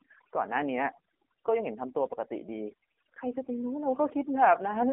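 From the first moment to the end, the speech carries overdone noise removal. The suppressor has pushed individual frequency bands down to nothing wherever they came close to its noise estimate, so the pauses fall to near silence scattered with twinkling specks, and the softer parts of the voice are eaten away. On a spectrogram the gaps look almost black, dotted with isolated bright pixels, and the voice traces break into ragged, patchy islands instead of smooth harmonics.

The whole clip also passes through the AMR narrowband mobile codec, and the coding damage is heavy. Content runs only from about 250 Hz to 3.4 kHz, and nothing at all sits above 3.5 kHz. With so few bits, the vocal-tract model excited by sparse pulses makes the voice buzzy and synthetic, and the residue warbles. That heavy degradation points to one of AMR-NB's lower modes, around 6.7 kbps. A spectrogram shows a hard ceiling near 3.5 kHz and smeared, quantised formant bands.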